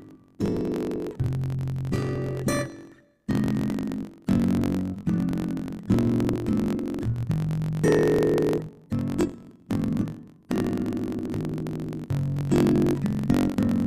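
A block size mismatch, truncated, runs through the whole clip. One stage hands over longer blocks than the next stage takes in. The tail of each block is dropped. That leaves a steady buzz at about 45.9 Hz, the rate at which the cuts recur. The blocks being written are 1024 samples long. Because part of every block is lost, the sound plays about 1.07 times too fast. The timbre stays.

Damaged data in a compressed stream then breaks through four times, at 1.22 s, 3.70 s, 6.32 to 6.36 s, and 12.37 s. At each point the decoder hits bad frames. It misreads or rejects them and loses its place. It hunts for the next valid frame header. Each event is heard as a short chirp or blip. The 6.32 s event lasts longest.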